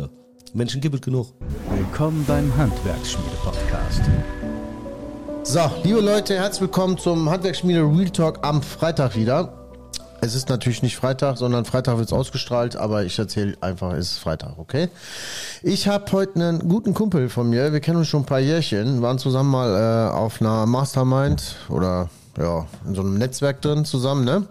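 From 1.50 to 3.00 s the sound turns grainy, with a gritty distortion that rides along with the signal and shifts as it changes. That's the signature of low bit depth without dither: the audio was likely rounded to very few levels with no noise added first, and the error sitting around 30 dB under the signal fits something like 7 bits.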